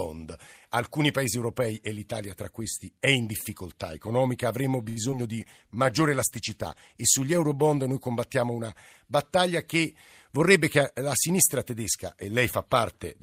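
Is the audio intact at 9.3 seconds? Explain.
Yes, the speech at 9.3 seconds is intact, with no audible fault at that moment.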